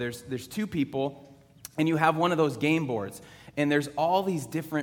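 No technical faults can be heard anywhere in the audio.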